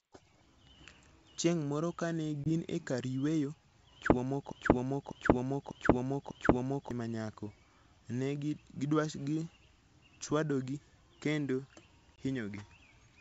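At 2.44 to 2.50 s, between "moro kane" and "e kar yueyo chwo", and again at 12.16 s after "ne gichwadogi kendo", packet loss on an ADPCM call leaves a hard-edged 20 ms hole, about one packet. Unlike a plain dropout, the speech comes back slightly distorted because the decoder's predictor and step size lost track of the sender's, and it settles within tens of milliseconds.

From 4.52 to 6.91 s, after "e kar yueyo chwo" and before "ma nyako", a broken-record loop repeats a 0.60 s fragment exactly four times, back to back. The likely cause is a stalled stream resending its last buffer. The speech that belonged there is lost. This sets it apart from the short holes, which remove sound without repeating anything. The G.722 wideband coding at 64 kbit/s keeps the speech clear up to about 7 kHz.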